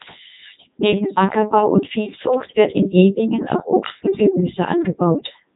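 Throughout the speech, a Codec 2 vocoder replaces the real waveform with sine-wave resynthesis. It sounds robotic and buzzy, with nothing above 3.8 kHz, which fits its 3.2 kbit/s mode.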